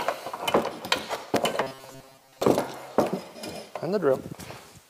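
From 1.63 to 2.42 s the sound turns into a rigid, metallic buzz at 133 Hz: robotic sound from repeated short buffers. The likely cause is starved playback looping a buffer of about 7.5 ms, replacing most of the real audio.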